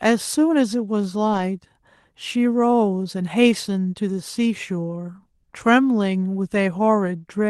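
Speech, carried over a call path with Opus coding. The sound has no content above about 12 kHz. One fault stands out: a lost packet rebuilt from error correction, from 1.33 to 1.39 s. About 40 ms of audio was lost in transit, which fits two lost packets. The decoder did not leave a gap. It played the lower-bitrate backup copy carried in the following packet instead. So the sound runs on, but that stretch is briefly rougher and noisier.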